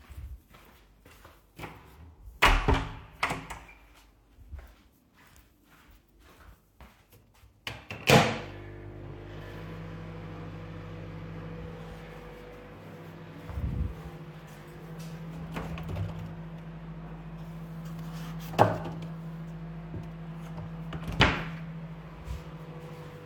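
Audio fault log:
No faults were found in the recording.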